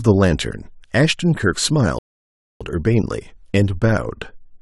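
A speech recording with one rebuffering stall. At 1.99 s the sound cuts to silence. It resumes at 2.61 s, picking up exactly where it stopped. The player ran out of downloaded audio and waited for more. Nothing is lost, but about 620 ms is added.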